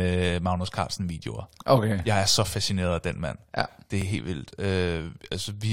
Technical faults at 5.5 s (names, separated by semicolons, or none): none